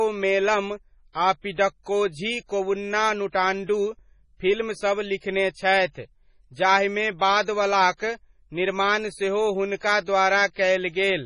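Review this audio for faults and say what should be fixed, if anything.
The speech runs its full length with heavy codec damage: nothing remains above 10.5 kHz, and the band below has a watery, swirling quality, with sibilants turning metallic and consonant attacks smearing. This is likely MP3 compression at a very low bitrate, around 24 kbps. Starved of bits, the encoder cuts the treble at a fixed point and drops weak frequency lines that flicker between frames. Prevent it by encoding at a higher bitrate or keeping a lossless master.

From 5.18 to 5.22 s, a short hiss about 48 ms long leads into a sharp onset, and the attack itself sounds softened. This is pre-echo. The transform block holding that onset spreads its quantisation noise across the whole block, so noise sized for the loud attack also fills the quiet stretch just before it. Prevent it by giving the encoder enough bitrate to switch to short blocks on transients.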